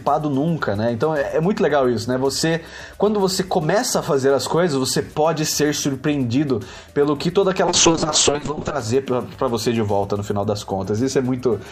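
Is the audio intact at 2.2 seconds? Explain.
Yes, at 2.2 seconds the audio plays through cleanly, with no dropout, click, distortion or other fault.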